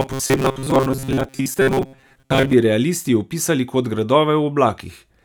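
Robotic sound from repeated short buffers runs from 0.01 to 2.54 s. New audio likely arrived too slowly here, so the playback kept filling the gaps by looping the most recent tiny slice while the real material was skipped, and for most of this stretch the output is repeats rather than fresh audio. The loop imposes a steady 134 Hz buzz, which points to a buffer of roughly 7.5 ms, turning the voice into a flat, metallic drone that only loosely tracks the speech.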